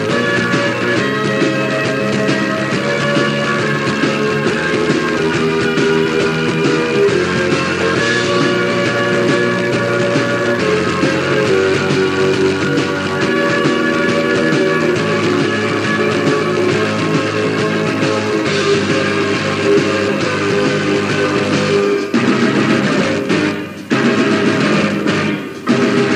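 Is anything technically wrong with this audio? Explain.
No, nothing technically wrong turns up here; it all sounds fine, with nothing to flag.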